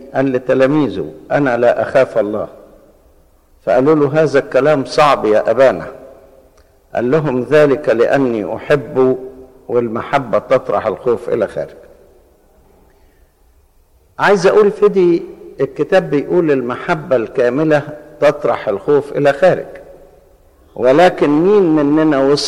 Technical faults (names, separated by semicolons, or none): none